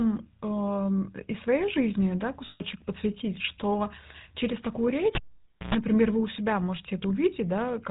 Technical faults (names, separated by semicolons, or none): GSM full-rate codec; lost GSM frames